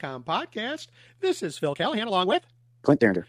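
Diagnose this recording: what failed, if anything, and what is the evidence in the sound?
From 1.57 s to the end at 3.28 s the speech suddenly rushes ahead at roughly 1.9 times its earlier pace, unchanged in pitch. This time-stretched section is likely a processing-stage stretch that compressed the audio by dropping short slices to fit a shorter length.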